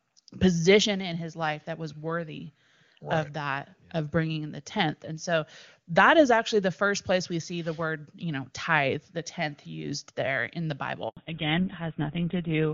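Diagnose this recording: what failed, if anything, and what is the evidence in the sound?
At the network stage there is a handover gap. Right after "used there in the", the audio drops out from 11.09 to 11.17 s, an 80 ms silence. No speech frames arrived while the call switched networks, so anything said in that window is lost.

At the codec stage there is a fallback to narrowband. From 11.17 s to the end, nothing remains above 4 kHz. Before that, the HD Voice audio ran wider, consistent with AMR-WB at its top rate. The duller, rougher result points to the GSM full-rate codec.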